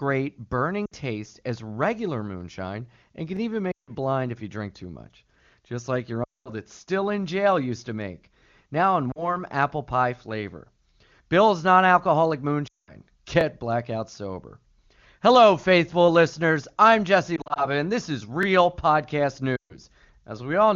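At 0.85 s the first lost AMR speech frames appear: radio errors corrupted a short stretch, about 60 ms, and the decoder carried forward its last good pitch and vocal tract settings with falling gain, so the sound briefly smears and dips. The same happens at 3.7 s (about 160 ms), 6.2 s (about 220 ms), and 9.1 s between "to make now in" and "apple pie flavor" (about 40 ms). The longer runs fade the sound to near silence within two frames before it returns weak and rough.

At 3.37 s comes the first overlapping chunk join. Each 5-second chunk starts about 21 ms before the previous one ended, so that sliver plays twice and produces a tight click-stutter. It recurs at 8.39 s and again at 13.41 s, just before "blackout sober".

More frame loss follows at 12.7 s (about 200 ms), then at 17.4 s, where about 100 ms of loss is scattered over 200 ms in runs no longer than 40 ms, giving a fluttering warble rather than a fade.

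The last chunk overlap falls at 18.43 s, after "and this is", and a final frame-loss run hits at 19.6 s (about 140 ms).

The two faults are easy to tell apart. A chunk overlap is an exact repeat, always about 21 ms long and about 5 s apart. Lost frames vary in length and timing, and they smear and fade the sound instead of repeating it. Around all of this, the AMR-WB codec itself sounds clean, which fits its top rate of 23.85 kbit/s.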